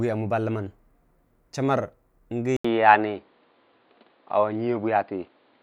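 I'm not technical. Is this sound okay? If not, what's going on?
No. At about 2.57 s the speech goes quiet for a split second, then returns duller and boxier, with nothing above about 4.9 kHz, a slightly different loudness and a faint new hiss. That's most likely an input switched to a poorer device, lasting to the end.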